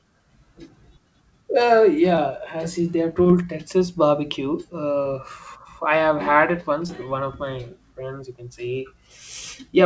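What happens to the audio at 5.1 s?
Short concealed packet loss occurs from 5.03 to 5.07 s, just before 5.1 s. About 20 ms of the call reached the decoder too late, so the receiver extended the preceding sound over the hole and blended back, leaving a brief smear or wobble.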